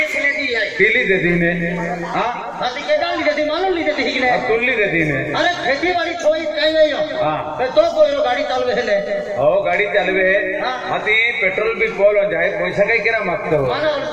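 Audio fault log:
Throughout: filter restarted on every block. The filter state resets each block, so a small transient starts every block, giving a 200 Hz buzz that tracks signal level.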